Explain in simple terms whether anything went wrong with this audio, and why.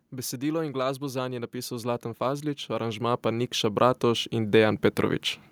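Two things went wrong, both in the automatic gain control, the part of the recording chain that adjusts loudness on its own.

First, automatic gain falling: from 0.05 to 0.77 seconds, the control judged the input too loud and gradually turned itself down. You hear the speech sink slightly over that stretch. The background noise drops along with it, because the whole signal is being turned down together, not just the voice.

Then automatic gain rising: from 0.97 to 5.28 seconds, the control decided the input was now too quiet and slowly turned itself up, by a large amount. Over those four seconds the speech swells steadily louder, and the background hiss or room sound rises right along with it. This slow, shared swell is the sign that a level control is at work, not the speaker getting louder.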